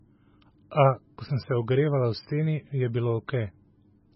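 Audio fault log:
Throughout, MP3 compression: nothing above 5.5 kHz, and the speech sounds watery as weak frequency lines flicker between frames, likely from a bitrate near 16 kbps.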